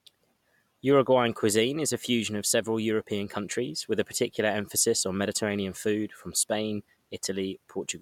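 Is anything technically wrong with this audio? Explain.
No, no technical faults here.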